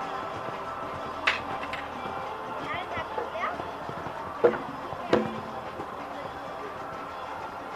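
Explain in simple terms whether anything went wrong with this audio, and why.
Nothing went wrong here: listening all the way through, there's nothing that sounds broken, cut off or out of place.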